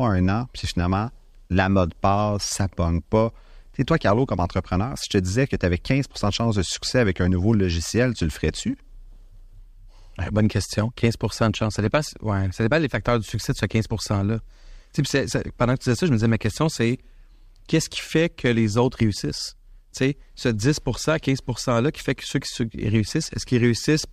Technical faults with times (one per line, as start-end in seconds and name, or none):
none